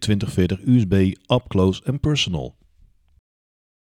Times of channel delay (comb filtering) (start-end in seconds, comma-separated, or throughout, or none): 2.13-4.00